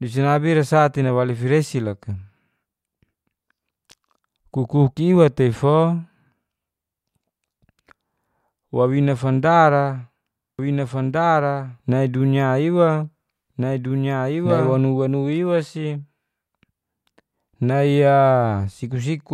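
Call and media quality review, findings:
Doubled audio track, 10.59 to 14.79 s. The speech is heard twice, with a full-band copy trailing by about one and a half seconds at a somewhat lower level. The copy has no decay or room colour. It starts and stops abruptly. The likely cause is a slower second capture path or an out-of-step edit.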